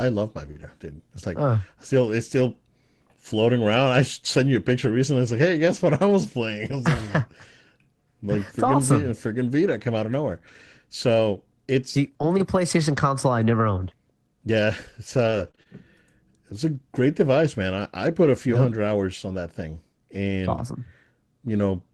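At 0.51 to 0.57 s the sound smears and wobbles briefly. This is short concealed packet loss: about 40 ms never arrived in time, so the receiver stretched the preceding sound across the hole and then blended back into the real signal.

Overlapping that, from 0.55 to 0.61 s, just after "love my", the audio turns rougher and noisier without any gap. This is a lost packet rebuilt from error correction. Two packets went missing, and the decoder played the low-bitrate copies carried in the following packets, about 40 ms in all. The same grainy patch recurs for 20 ms each at 3.75 to 3.77 s (just before "I sent you a"), 5.27 to 5.29 s, 8.65 to 8.67 s, and 18.25 to 18.27 s (between "device man I I" and "a few yep hundred").

From 15.23 to 15.67 s the sound turns choppy, with pieces missing. This is repeated packet loss (robotic sound): three separate holes, the longest 21 ms, were each patched by continuing the last sound. 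About 13% of that stretch is concealed, and roughly 150 ms more was rebuilt.

The WebRTC call path contributes its usual coding noise, and the 12 kHz high-frequency ceiling fits Opus at around 24 kb/s.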